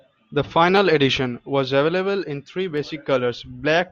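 Sharp single clicks sit at 0.77 s and again at 2.78 s in the speech. Each is likely dropped samples: a fraction of a millisecond of the stream goes missing, so the waveform jumps abruptly to a later value, producing a brief click and a thin vertical line across the spectrum.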